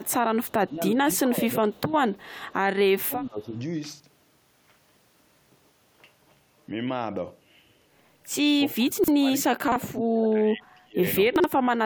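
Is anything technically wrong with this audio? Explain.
Yes, this speech clip has three kinds of fault.

Echo leak: at 0.03–0.11, 0.45–0.52, 1.74–1.92 and 2.13–2.53 s, the far end's echo canceller likely left part of its loudspeaker pickup in the microphone signal and sent it back. That residue returns as a faint delayed copy of the talker, about 35 dB below the speech and trailing it by 366 ms.

Speech suppressed in double talk: while both sides spoke at once, the canceller likely could not tell the local talker from the loudspeaker echo and attenuated both. The speech dips at 0.67–1.08 s (about 15 dB at its deepest), 1.26–1.74 s (about 10 dB), 3.02–3.56 s (about 20 dB), and most heavily across 8.72–11.0 s, where it falls by about 35 dB and fades in and out for roughly two seconds.

Chunks out of order: at 4.0–4.08, 9.68–9.76 and 11.36–11.44 s, a 40 ms block was delivered a slot late and played after the audio that should follow it. 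At 8.92–9.08 s the displacement is larger, fitting a block held back three slots. Nothing is missing, but each swap leaves hard joins that briefly scramble the speech.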